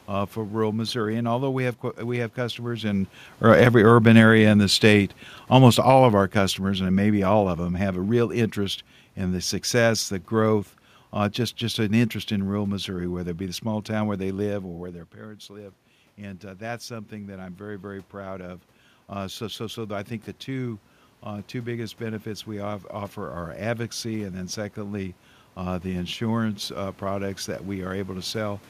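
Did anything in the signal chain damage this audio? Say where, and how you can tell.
Yes. Automatic gain falling in call processing: after "we have customers in", from 3.32 to 8.32 s, level sinks about 10 dB with the room noise, unlike a talker simply moving away.

Automatic gain rising, also call processing: after "small town where they", input dropped about 15 dB, then 14.57 to 25.22 s voice and background swell together about 13 dB, so gain control, not movement.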